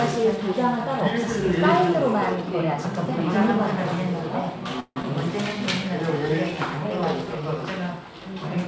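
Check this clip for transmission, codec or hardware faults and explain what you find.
Two transmission faults are audible, both on a wideband call path whose content stops at 8 kHz, which fits G.722.

The first is a long network dropout from 4.80 to 5.05 s. The sound turns into a fading, buzzy continuation of the last signal for about 230 ms, then drops to roughly 50 ms of silence. When audio resumes, about 100 ms of material is gone. The likely cause is a stall in packet arrival: the receiver synthesised a fill until it ran out of plausible signal. The jump afterward suggests the buffer delay shifted by around 70 ms.

The second is a jitter buffer slow-down from 7.24 to 7.59 s. Playback runs at about 88% speed with unchanged pitch, so the sound is audibly stretched and drawn out. The receiver was rebuilding its reserve by repeating short periodic segments several times in a row, adding 47 ms of duration over that stretch.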